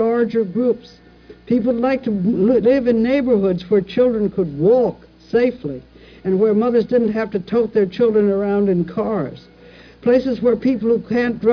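No technical fault can be heard anywhere in the clip. Nothing in the audio points to a problem in the chain that recorded or carried it.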